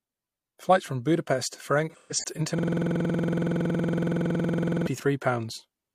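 An AAC decoder lost frames between 1.90 and 2.40 s in this speech recording. About 256 ms of audio went missing, scattered across roughly half a second, with the longest gap around 150 ms, which points to a handful of dropped frames. The decoder's AAC frame loss concealment filled each hole by reusing the last good spectrum, so those stretches turn smeared and noisy rather than silent. From 2.59 to 4.87 s, a system hang loop occurs: the machine or its audio driver stalled while the sound hardware kept replaying the same ring buffer. A single 46.44 ms slice, which fits a 2048-sample buffer, repeats 49 times at 21.5 Hz. The result is a rigid, rattling stutter that sits on one frozen fragment for more than two seconds.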